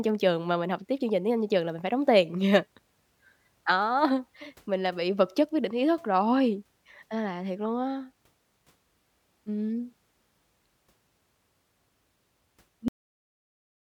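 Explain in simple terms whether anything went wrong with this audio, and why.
Something did go wrong at the very end: a cut-off end. At 12.88 s the speech stops in the middle of a sound and drops straight into dead silence that lasts the final second or so. The last stretch of audio was never recorded or played out. A natural ending or a fade would let the sound die away, and a brief dropout would come back afterwards. Here there is no tail and nothing follows.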